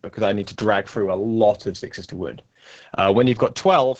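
Opus voice compression runs through the whole speech clip, heavily. Nothing above about 8 kHz survives, consistent with SILK's wideband mode, and the coarsely coded excitation makes the voice muffled, hoarse and slightly robotic, which fits a bitrate near 10 kbps.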